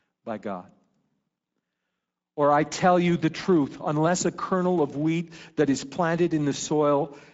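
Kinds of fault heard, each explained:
Speex codec: A CELP speech codec from older VoIP and game chat that rebuilds the voice from a compact model plus an excitation signal, and here there aren't enough bits for the excitation, so the speech comes through plainly noisy and a bit hoarse throughout. The bandwidth stops at 7.7 kHz, and the upper band sounds like a shaped, hissy fill rather than real detail, which fits a middle Speex setting somewhere around 17 kbps.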